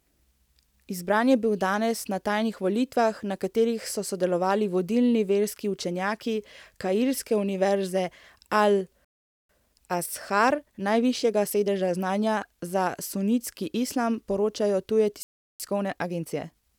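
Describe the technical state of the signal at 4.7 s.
At 4.7 s the signal is intact, with no audible technical fault at that moment.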